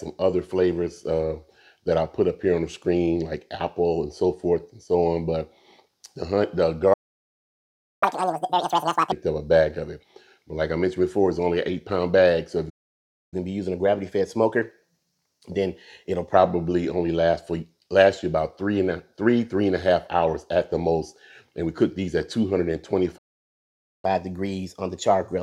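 At 6.93 s the player's buffer likely ran dry, a playback stall that silences the sound for 1.08 s. Catch-up at higher speed follows from 8.03 to 9.12 s: the backlog is resampled at 2.0x, so it rushes by about ten semitones high.

A second stall at 12.69 s, likely another buffer underrun, cuts out 0.62 s. The player then catches up at 1.1x from 13.34 to 16.34 s, with the pitch raised about a semitone and a half.

A third stall at 23.17 s, again likely a starved buffer, drops 0.86 s. Catch-up runs from 24.05 s to the end at 1.15x, about a whole tone sharp.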